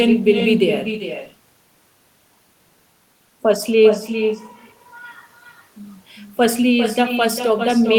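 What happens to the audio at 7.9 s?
At 7.9 s the speech is still shadowed by echo with no canceller, present throughout: the far end's loudspeaker feeds its microphone, returning a copy roughly 0.4 s late at about 7 dB down. A spectrogram shows weaker duplicate harmonics trailing each syllable.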